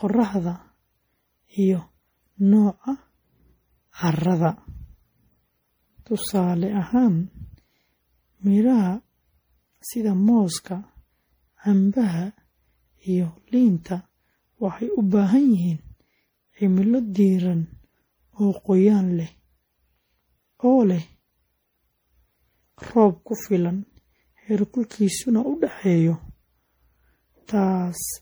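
From start to finish the speech sounds swirly and hollow, with a watery smear over the consonants and blunted attacks, more degraded than a single low-bitrate encode would leave it. This is generation loss, most likely from the audio being decoded and re-encoded through a lossy codec around seven times, in a way that fits a 64 kbit/s MP3. Each pass quantised on a shifted frame grid, so noise and spectral gaps accumulated instead of repeating.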